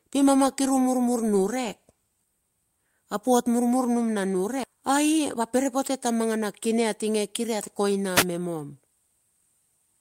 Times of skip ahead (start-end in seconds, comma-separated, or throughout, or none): 4.63-4.65